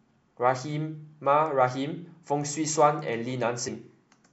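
At 3.67 s the speech jumps forward, losing about 50 ms of audio. These are compressed frames skipped: whole frames missing or rejected by the decoder.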